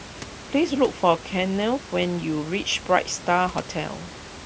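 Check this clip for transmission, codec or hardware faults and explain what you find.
No transmission, codec or hardware faults turn up in this speech clip. The room noise sits about 16 dB below the speech, part of the space where the microphone was rather than anything the system added.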